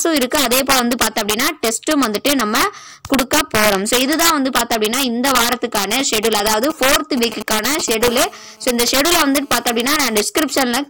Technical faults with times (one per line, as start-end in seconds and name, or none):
0.00-10.89 integer overflow
5.76-7.90 GSM signalling bursts
8.04-10.15 GSM phone buzz